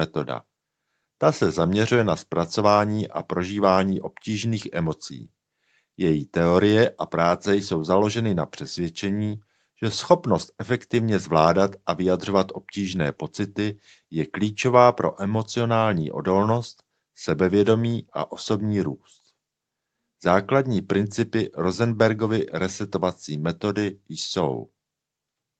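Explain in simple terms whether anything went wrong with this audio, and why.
Nothing went wrong; it sounds like an ordinary call.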